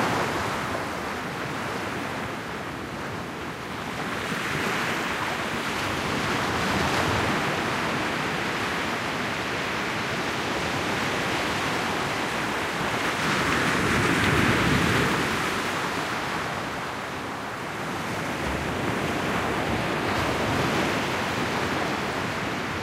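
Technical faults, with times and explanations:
No technical faults were found anywhere in this audio.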